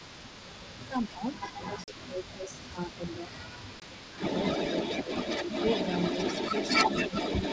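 Right from 0 s and running through the whole clip there's an echo leak: a second copy of the speech trailing about 313 ms behind, roughly as loud as the original, likely from a far-end canceller letting its loudspeaker pickup through. From 0.88 to 1.34 s and 1.63 to 4.21 s the speech sags by up to about 15 dB, with shorter dips of about 10 dB at 5.03 to 5.1 s and 7.09 to 7.14 s. That pumping is likely speech suppressed in double talk. Inside the longer stretch, packet loss on an ADPCM call leaves hard-edged gaps at 1.84 to 1.93 s, 40 ms lost, and 3.80 to 3.83 s, 20 ms lost. Each time the speech comes back slightly distorted before settling.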